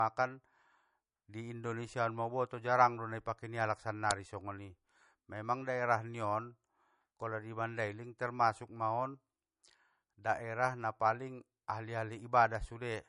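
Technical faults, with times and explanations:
Throughout: low-bitrate audio saved at a high bitrate. Nothing comes through above about 10.6 kHz, and the speech carries that swirly, smeared MP3 texture you get when a codec has been starved of bits. The likely story is an MP3 made at something near 40 kbit/s and then re-encoded as a roughly 192 kbit/s MP3. The second pass keeps the file big, but it can't bring back the top end or undo the damage the first pass did.
4.11 s: uninitialised buffer. There's a sudden, loud crack lasting only about 0.67 ms, which fits a 32-sample block being played before any real audio had been written into it. Whatever junk was sitting in that memory got read out as samples. That's why it sounds harsh and completely unrelated to the speech around it.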